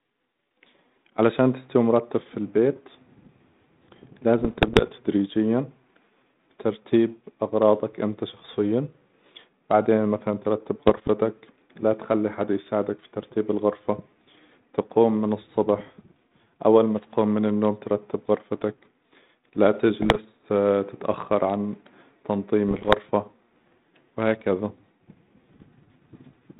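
Bit errors on the 32 kbit/s G.726 ADPCM link flip bits in four bursts: 4.4 to 4.88 s, 10.87 to 11.1 s, 20.02 to 20.18 s, and 22.68 to 22.97 s. About one bit in a hundred or fewer is corrupted, and each error throws off the decoder's step size and prediction. The speech pops and turns briefly rough, with its level jumping.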